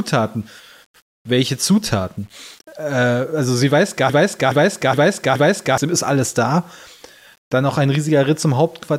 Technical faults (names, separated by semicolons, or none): low bit depth without dither; broken-record loop